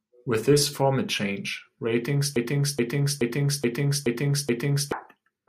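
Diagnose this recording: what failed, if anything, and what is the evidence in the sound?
Broken-record loop, 2.36 to 4.92 s, after "this format change ratings": a 0.43 s piece repeats six times, likely from a stalled playback buffer resending its last fragment.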